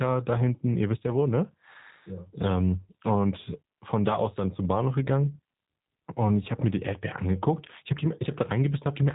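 G.729 codec coding runs through the whole clip, from start to finish. The speech has been rebuilt from a model rather than carried as a waveform: a vocal tract filter shapes each 10 ms frame, a pitch predictor supplies the periodic part, and a handful of pulses fill in the rest. The damage is plainly audible as a rough, synthetic texture, and nothing above 3.8 kHz survives, which fits an 8 kbit/s VoIP link.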